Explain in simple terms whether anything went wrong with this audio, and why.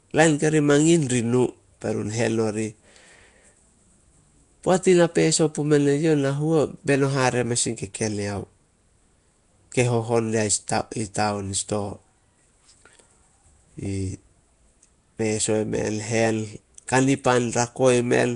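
Throughout the speech, a rough, hissy halo and a smeared, underwater quality are clearly audible, with nothing above about 10.6 kHz. The likely cause is Nellymoser compression, Flash's old microphone codec, which replaces weak frequency bands with filler noise. That filler noise is the hiss, unlike ordinary low-quality compression's watery swirl.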